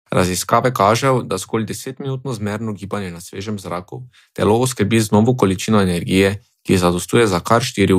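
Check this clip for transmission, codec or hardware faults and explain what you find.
Zipper noise appears twice. From 0.98 to 1.93 s, just before "zmerno gibanje na svežem", the level drops about 10 dB in 2 dB steps, roughly seven per second. From 3.99 to 4.57 s, after "gibanje na svežem zraku", it rises about 10 dB, roughly ten steps per second. Each unsmoothed gain jump makes a small click, heard as ticking over the speech while the level moves.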